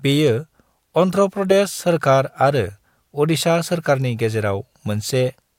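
Nothing stood out as a technical fault on listening to the speech in this recording.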